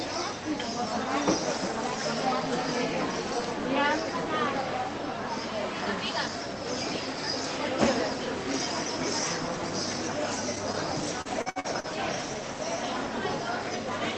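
Repeated packet loss (robotic sound), 11.21 to 11.90 s: five dropouts, the longest 59 ms, are filled by extending prior audio, making about a third of that span choppy.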